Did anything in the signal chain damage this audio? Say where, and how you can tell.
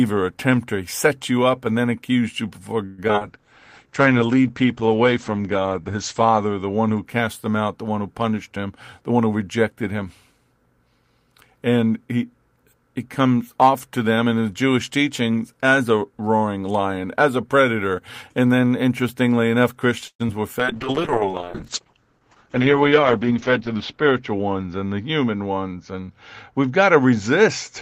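Yes, several stages of the call path damaged it, mostly network delivery and the codec.

Repeated packet loss (robotic sound) runs from 2.85 to 3.23 s in this speech: five holes, the longest 125 ms, with nearly half the span patched by continuing the last sound. The result is choppy and robotic. On a spectrogram it shows as repeated smeared harmonic blocks with ragged edges.

A call bitrate drop follows at 3.23 to 7.10 s, from 32 to 11 kbps, and a second one runs from 20.59 s to the end, down to 8 kbps. Opus coded more coarsely and cut the bandwidth from 20 kHz to 8 kHz. It sounds muffled and watery, and the spectrogram shows a hard ceiling at 8 kHz.

A jitter buffer slow-down at 3.87 to 4.19 s added 60 ms by repeating pitch periods, so playback ran at 84% speed with unchanged pitch. The sounds are drawn out. The waveform shows near-identical cycles repeated back to back.

A jitter buffer speed-up occurs at 8.56 to 10.40 s (106%) and again at 22.11 to 23.69 s (107%). 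Each removed about 150 ms of short pitch-period slices, so the speech sounds hurried at the same pitch. On a spectrogram, syllables look compressed without any harmonic shift.

A call audio freeze at 20.08 to 20.22 s inserts a 120 ms pause. The last sound carries on briefly and then goes silent for about 70 ms before resuming where it stopped, and nothing is lost. The likely cause is packets held up until the jitter buffer ran empty. The waveform shows a flat gap.

Short concealed packet loss at 20.28 to 20.31 s left about 20 ms missing and filled with a brief continuation of the preceding sound. It is heard as a quick smear or wobble. The spectrogram shows a thin blurred strip.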